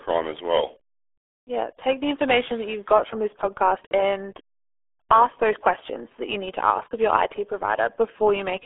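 RealAudio 14.4 codec damage runs through the whole clip. The speech is squeezed into a telephone-like band of roughly 300 Hz to 3.4 kHz, with nothing above 3.5 kHz. Heavy coding leaves it muffled and gargly, which fits a very low-rate 8 kbit/s dial-up speech coder.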